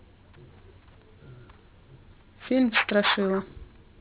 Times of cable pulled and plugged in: none

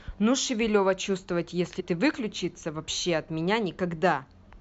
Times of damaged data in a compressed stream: 1.79-1.81

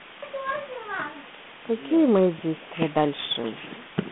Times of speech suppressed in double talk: none

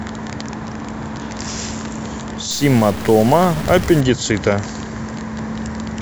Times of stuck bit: 2.51-4.01

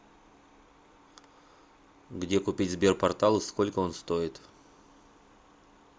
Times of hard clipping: none

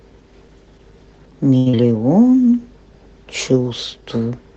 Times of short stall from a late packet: 1.57-1.68

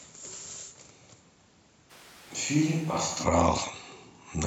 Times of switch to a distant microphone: 1.92-3.23

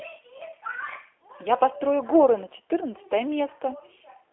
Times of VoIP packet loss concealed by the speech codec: 0.38-0.43

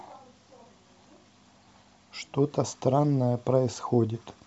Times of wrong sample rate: none

